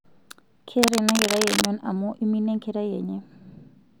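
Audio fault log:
0.79–1.66 s: cable scratch noise. For just under a second, a dense, uneven crackle and rustle sits right over the speech at roughly the same loudness. It's likely a worn cable or connector being moved, so the contact resistance keeps jumping and spraying noise bursts into the signal.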